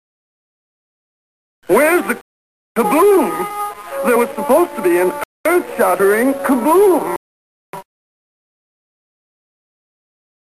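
The audio drops to dead silence three times: from 2.21 to 2.76 s (550 ms), from 5.24 to 5.46 s (219 ms), and from 7.16 to 7.74 s (572 ms). Each is likely a Bluetooth stall, where delayed packets left the receiver's buffer empty and playback halted until data arrived again. On the waveform, each gap is a flat line. On a spectrogram, each is a clean vertical band of blank across every frequency, with sharp edges on both sides.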